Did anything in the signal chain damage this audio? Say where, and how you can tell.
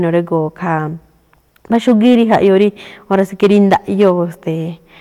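Yes. Hard clipping appears from 1.74 to 2.64 s and again from 3.13 to 4.11 s. The speech is driven about 6 dB and then about 7 dB past what a stage can pass, pointing to a converter or gain stage overloaded at full scale. The waveform peaks are sliced flat, and those squared tops add harmonics high in the spectrum, heard as distortion on the louder syllables in both spans.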